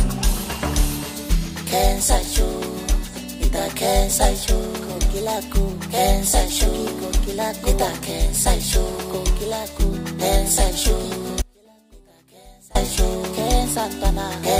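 An audio dropout to a faint residue cuts the sound from 11.42 to 12.75 s. The waveform collapses abruptly to a thin trace roughly 30 dB down, likely from a signal loss upstream.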